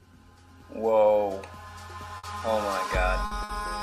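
A burst of packet loss occurs at 2.17–2.26 s, 3.25–3.34 s and 3.43–3.52 s. Each time, the receiver stretches and fades the last sound for 60 ms, then resumes with 60 ms missing.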